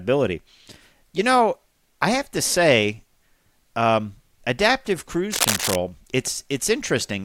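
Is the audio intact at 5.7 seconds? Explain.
No. At 5.7 seconds the speech is overlaid by cable scratch noise, running from about 5.33 to 5.76 s at roughly the level of the voice itself. It sounds like rustling, scratchy crackle, likely from a worn cable or connector being moved so its contact resistance flickers. On a spectrogram it shows as dense, irregular broadband speckling, and the waveform carries jagged, uneven bursts.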